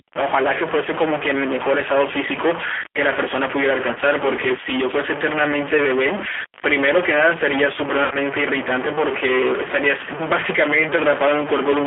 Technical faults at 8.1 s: stuck bit; G.729 codec; VoIP packet loss concealed by the speech codec

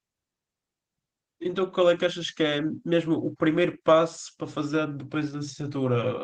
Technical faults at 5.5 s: Opus voice compression

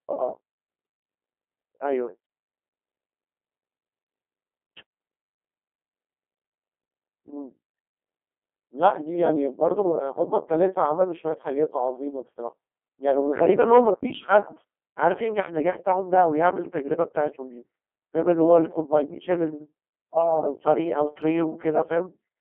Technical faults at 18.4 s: Codec 2 vocoder

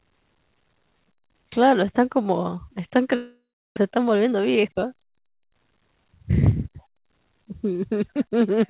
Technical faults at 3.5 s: long network dropout

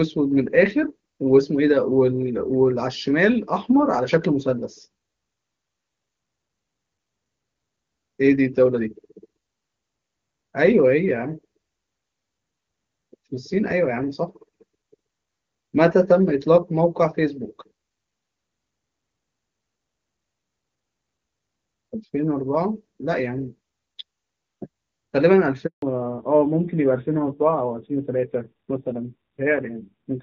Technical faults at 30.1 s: fallback to narrowband

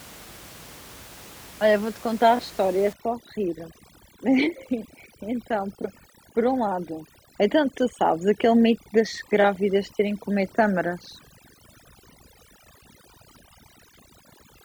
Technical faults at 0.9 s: none

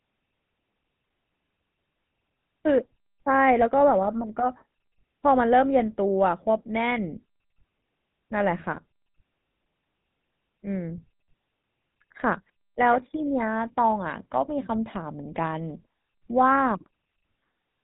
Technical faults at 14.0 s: GSM full-rate codec

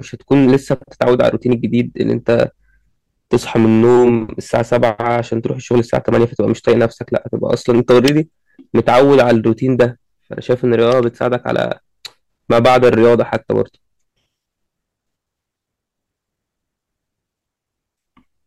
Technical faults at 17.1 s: hard clipping

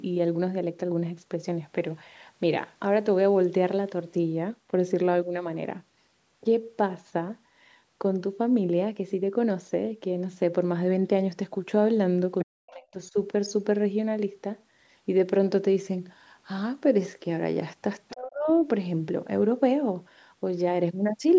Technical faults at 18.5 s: speech suppressed in double talk

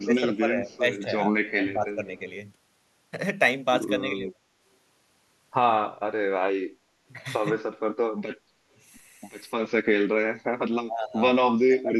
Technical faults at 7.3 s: none

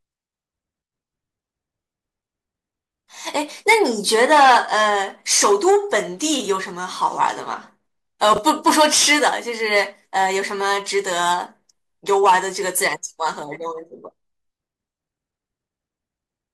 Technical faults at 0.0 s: none

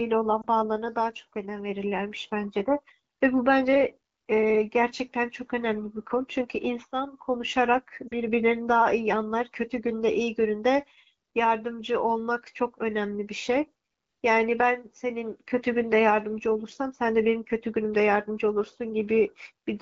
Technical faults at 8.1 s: lost AMR speech frames

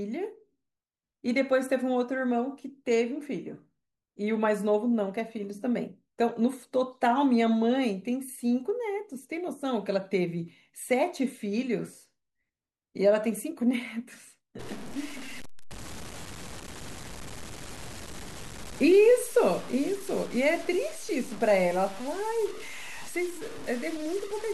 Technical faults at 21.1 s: low bit depth without dither

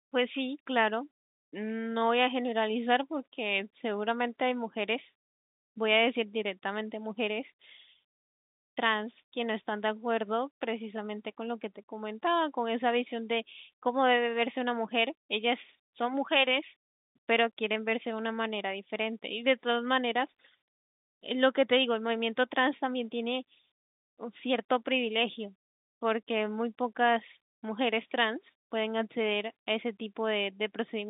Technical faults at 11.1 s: none

